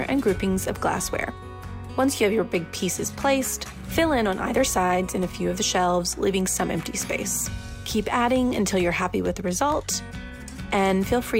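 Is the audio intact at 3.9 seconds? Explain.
Yes, the audio at 3.9 seconds is intact, with no dropout, click, distortion or other fault to be heard at that moment.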